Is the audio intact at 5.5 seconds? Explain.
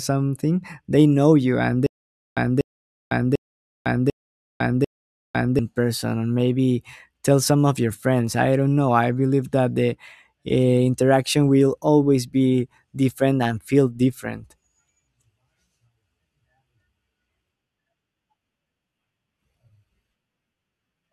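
No. From 1.87 to 5.59 s, just after "they know you and", a stutter with silent gaps repeats one 0.24 s burst five times, each followed by 0.50 s of digital silence, likely a stalled stream replaying its last fragment. It looks like identical blocks separated by flat, empty bands.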